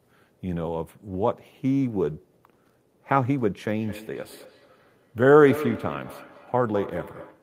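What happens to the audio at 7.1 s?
At 7.1 s the speech is trailed by thin, ringing repeats arriving about a fifth of a second apart, up to about 11 dB below the speech. This feedback echo between two devices runs from 3.71 s to the end: one device replays the other's microphone, which captures it again, beyond either echo canceller's reach.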